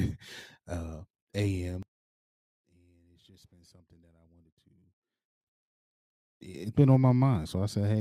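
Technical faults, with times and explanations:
1.83–5.41 s, one channel inverted: the speech abruptly drops by about 26 dB, leaving a faint residue, then returns to full level at 5.41 s. The likely cause is one stereo channel flipped in polarity during this span. When the two channels are summed to mono, the material they share, including the centred voice and its bass, cancels, and only their small difference remains audible.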